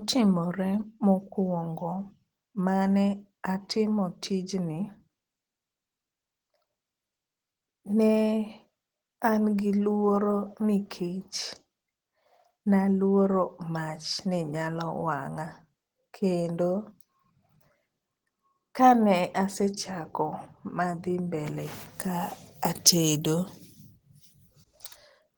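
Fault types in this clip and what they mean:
Opus compression: throughout the clip, the speech sounds hoarse and grainy, with rough, noise-filled texture in the upper bands, though content still reaches about 20.2 kHz. This is likely a low-rate Opus encode; the character points to roughly 16 kbps in hybrid mode, where a speech coder handles the low band and the upper bands keep only their energy, refilled with noise or folded copies of lower bands instead of true detail.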